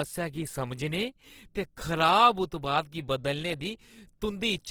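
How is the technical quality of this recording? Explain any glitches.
Compression damage is plainly audible across the whole clip. Throughout, likely Opus compression in CELT mode at roughly 16 kbps fills starved bands with folded or noise content, making the speech rough and grainy.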